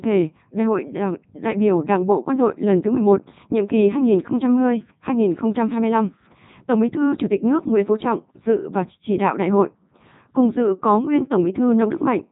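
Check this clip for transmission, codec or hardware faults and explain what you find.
The clip has a codec fault. Codec 2 vocoder, throughout: only pitch, voicing, energy and a spectral envelope survive, and the decoder rebuilds the speech from sine waves. The result is heavily robotic and buzzy, with nothing above 3.8 kHz, which fits the 3.2 kbit/s mode.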